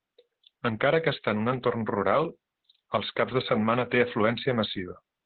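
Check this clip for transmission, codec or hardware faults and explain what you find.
One codec fault runs through the whole clip. Opus voice compression muffles and roughens the speech throughout, with nothing above about 4.2 kHz. The narrowband SILK coding is heavy, which fits a bitrate near 8 kbps.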